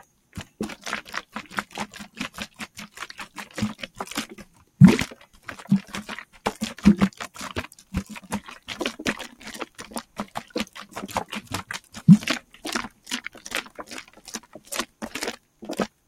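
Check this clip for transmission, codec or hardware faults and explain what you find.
A speech-oriented noise suppressor has been left active on a recording of everyday sounds, and it causes two related faults.

Noise suppressor applied to music or sounds: this runs through the whole clip. The processor classifies steady, sustained components and ambience as background noise and attenuates them, while sharp onsets pass largely intact. Gain swings of roughly 15 dB result. The level pumps and flutters, and decays and room tails sound thinned and clipped rather than fading naturally.

Sound cut by the noise suppressor: the deepest dips occur at 0.0–0.6 s, 2.09–3.36 s, 3.9–5.48 s, 6.25–6.41 s, 7.68–7.93 s, 9.32–10.76 s, and from 11.8 s to the end. In these stretches the suppressor judged the material to be noise and pulled it down by about 11 dB, and by about 12 dB at 3.9–5.48 s and in the final stretch. 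The attenuation falls hardest on sustained and decaying parts, so they sink audibly or cut off early. Only part of each window is affected, much more of it in the long final stretch.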